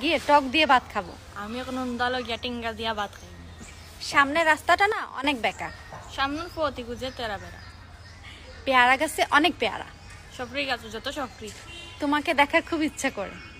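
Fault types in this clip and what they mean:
Sudden gain jump: at 4.92 s the level drops by about 12 dB in a single step, with sound and background noise falling together, then returns at 5.24 s; the likely cause is a gain setting applied instantly with no ramp between samples.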